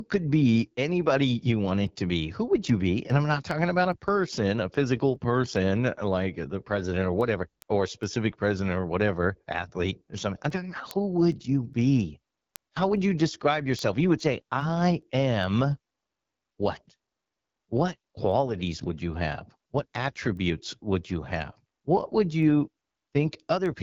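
AMR wideband (HD Voice) codec damage runs through the whole speech clip. The band stops near 7.4 kHz, and the top stretch above about 6.4 kHz is filled with shaped noise rather than real detail. Below that, the coder rebuilds the voice from a simplified vocal tract model driven by sparse pulses. Here that model is plainly strained, giving a rough, raspy texture that fits one of the lowest rates, around 8.85 kbit/s.

Word clock ticks start at 0.22 s and recur until 23.66 s, roughly every 0.4 s, around fifty in all. The receiving device is running on its own clock, not locked to the sender's. Each time the two clocks drift a sample apart, a single sample is dropped or repeated and the neighbouring samples are misread. That produces sharp, evenly spaced ticks of uneven strength, which points to a clock mismatch of roughly 50 parts per million.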